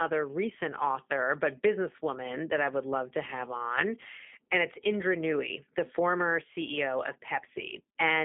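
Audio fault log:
Throughout: G.729 codec (the G.729A variant). The speech comes across as narrowband telephone audio at 8 kbit/s. It sounds slightly rough and synthetic because the codec discards the waveform and rebuilds each 10 ms frame from a vocal tract filter, a pitch predictor and a few pulses, which leaves plainly audible coding damage. The band runs from about 200 Hz to 3.5 kHz, so on a spectrogram the energy stops sharply near 3.6 kHz with nothing above it.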